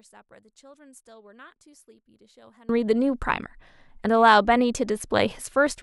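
From the start to 2.69 s, the speech drops by about 28 dB and turns faint. The likely cause is one channel inverted. With one side's polarity reversed, the shared centre content cancels when the channels are summed to mono, leaving only their small difference.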